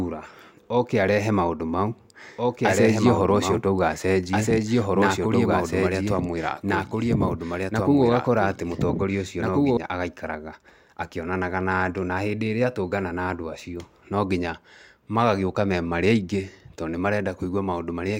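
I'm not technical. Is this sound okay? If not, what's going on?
No. The recording system likely picked up the speech twice, creating a doubled audio track. From 2.37 to 9.77 s, between "oke arehe maũndũ mau" and "agaikaraga akĩonanaga na andũ", an equally loud copy trails about a second and a half behind, then stops abruptly.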